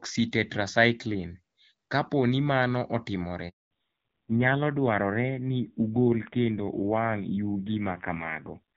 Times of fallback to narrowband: 3.71-8.76

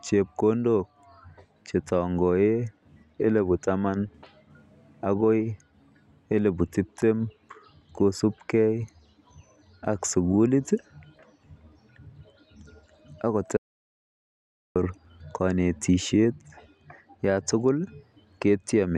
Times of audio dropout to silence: 13.57-14.76

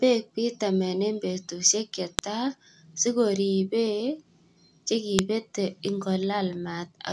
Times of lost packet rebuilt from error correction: none

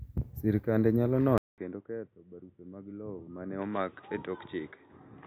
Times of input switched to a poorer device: 1.38-5.27

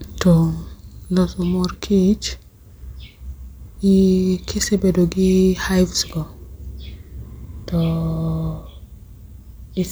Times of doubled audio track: none

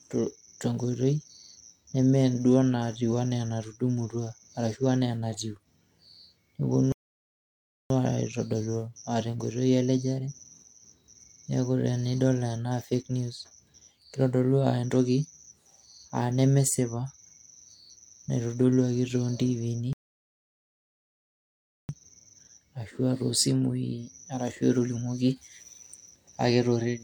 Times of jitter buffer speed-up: none

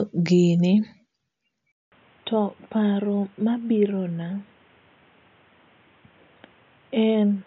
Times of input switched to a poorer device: 1.72-7.46

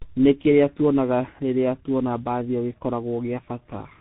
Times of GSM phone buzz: none

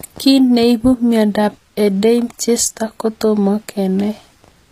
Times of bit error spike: none

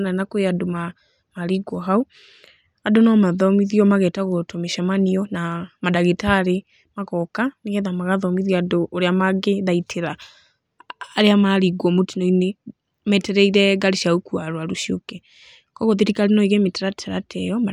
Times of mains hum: none

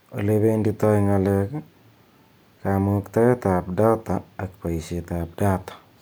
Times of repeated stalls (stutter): none

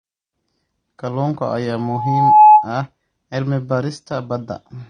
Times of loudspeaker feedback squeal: 1.78-2.69

